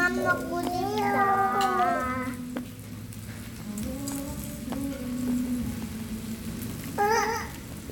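From about 5.16 s to the end, there's a doubled audio track: a second full-band copy of the sound trails roughly a fifth of a second behind, a bit quieter, around 5 dB down. It kicks in abruptly with no room tail, likely a second, slower capture path mixed in.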